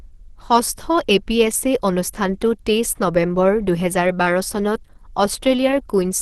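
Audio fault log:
throughout, Opus compression: the speech sounds plainly muffled and hoarse, with nothing above 12.1 kHz. This is likely the codec's hybrid speech mode at a low rate near 16 kbps, which makes the sound hoarse rather than swirling and hollowed out as MP3 would.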